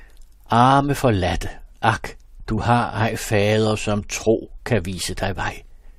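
Damaged data in a compressed stream at 2.57 s, right after "arme forladte ak" and before "har ej fader som", breaks into the speech as a very short blip. Bytes of the encoded stream at that point were corrupted, so the decoder could not interpret the frame it was reading. It lost its place in the data and had to hunt for the next valid frame header, producing a brief glitch instead of the intended sound.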